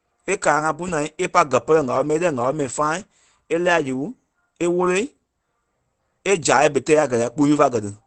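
Opus compression affects this speech recording from start to finish. Nothing is present above about 8.4 kHz, so the top of the spectrum is simply missing and the sound is muffled, with a hoarse, rough edge to the voice. The damage is plainly audible. The narrowed band and that hoarse texture point to Opus at a low rate running in its SILK speech mode, which is likely what happened, with a bitrate around 16 kbps and wideband bandwidth.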